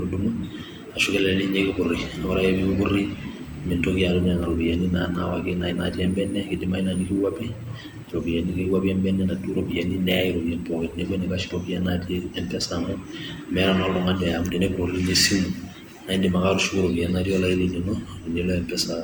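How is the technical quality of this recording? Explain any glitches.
The recording has two faults running through the whole speech clip.

A USB whine sits at a fixed 8 kHz, about 40 dB below the speech. It is current from the bus's 125-microsecond microframes leaking through power or ground, and it shows on a spectrogram as a thin, unbroken horizontal line.

Generation loss makes the speech sound swirly, smeared and hollow, with softened attacks. The likely cause is about four rounds of MP3 re-encoding at 96 kbit/s, each pass adding fresh quantisation noise. On a spectrogram this shows as patchy holes and blurred onsets, with nothing above 20.2 kHz.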